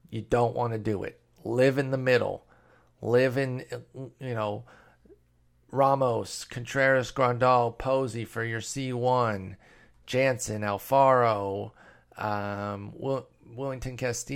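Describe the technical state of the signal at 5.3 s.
At 5.3 s the signal is intact, with no dropout, clipping, distortion or other technical fault audible at that point.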